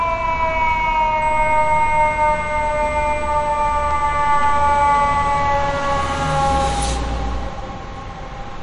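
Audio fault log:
throughout, MP3 compression: the sound has a watery, swirling quality, with metallic chirping on bright, noisy parts and softened attacks, and nothing at all above 10.6 kHz. This is likely heavy MP3 encoding, in a way that fits a low bitrate around 48 kbps. Short of bits, the encoder cuts the top band off at a fixed frequency and drops weak frequency lines, which flicker in and out from frame to frame and produce the swirl.
1.22–5.39 s, USB whine: a steady, thin, high-pitched tone at 8 kHz sits under the sound for about four seconds, about 30 dB below the signal. Its fixed pitch points to the USB bus, whose 125-microsecond microframes draw current in regular pulses. That pulsing leaks into the audio through shared power or ground and turns into a tone at exactly the microframe rate. It stops at 5.39 s.
3.91 s, block of digital silence: a single sharp tick breaks through, inside the stretch where the whine is present. 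The audio drops to silence for 1.33 ms, which fits a 64-sample buffer that was not filled in time, and then returns. Because the signal jumps to silence and back with no fade, each edge makes a step in the waveform. At this length the two steps merge into one click rather than an audible gap.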